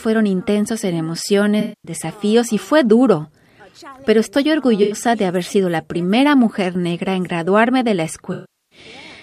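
AAC frame loss with concealment: the decoder lost frames and rebuilt them from the last good spectrum, smearing the sound into a noisy patch at 1.60–1.92, 4.83–4.95 and 8.32–8.79 s.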